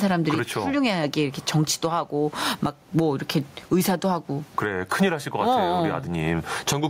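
From start to finish, loud and quiet syllables sit unnaturally close together, giving a squashed, flattened delivery, and the swing in gain is large, around 15 dB. This gain pumping is likely caused by the input gain being set far too high, with a fast limiter or compressor clamping down on each loud sound. The room noise sits about 38 dB below the speech.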